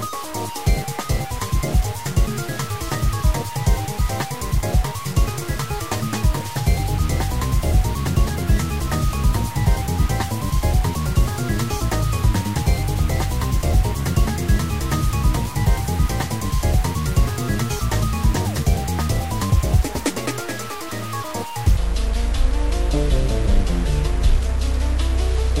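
From the first moment to the end, the audio carries a noisy, distorted grit that never lets up, and even the quiet gaps are filled with a steady hiss instead of silence. This points to a stuck bit, likely one line of the converter or data path held fixed, so roughly half the samples are shifted by the same amount. On a waveform the trace looks offset on about half its samples, and a spectrogram shows a dense broadband haze reaching all the way up, with no clean floor between sounds.

At 21.77 s the sound suddenly drops in pitch and drags. From there to the end it plays at 0.566 times its proper speed, so everything sits about ten semitones lower and stretches out almost twice as long. This is a section at the wrong speed, likely from being fitted to the wrong clock. On a spectrogram the harmonics and formant bands slide down and spread apart in time, and on the waveform the cycles visibly lengthen.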